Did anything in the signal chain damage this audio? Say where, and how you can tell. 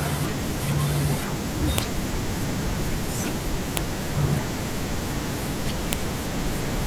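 Yes. At the storage or file-joining stage: sharp, loud clicks at 1.78, 3.77 and 5.93 seconds are the file header played as audio, with header bytes from each joined WAV piece decoded as samples. Unlike dropout clicks, they land at piece boundaries whatever the speech is doing.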